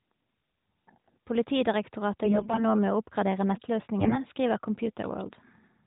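From 2.24 to 2.65 s, AMR bit errors hit the speech. The voice keeps its rough pitch and level but turns hoarse and gargly. A weak link flipped many of the less protected bits in each frame. The main checksum still passed, so the decoder used bad pulse positions and wrong gain and spectral values. It happens again from 4.00 to 4.17 s, right after "med å oppgradere". This burst is shorter but has a heavier error rate, within narrowband audio that stops near 4 kHz.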